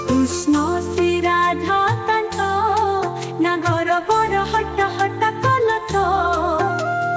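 Nothing stood out on listening, and the band limit around 8 kHz is what a wideband call link normally gives.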